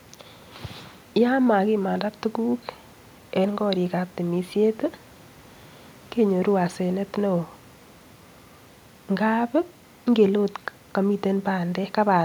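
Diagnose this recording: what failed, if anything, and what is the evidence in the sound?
No fault found in this recording.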